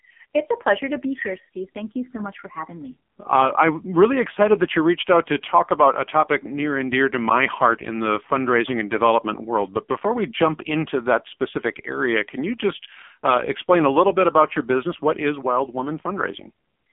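AMR narrowband mobile codec throughout: the speech is confined to 200 Hz to 3.5 kHz, and its heavy buzzy, synthetic texture fits a low 5.9 kbps mode.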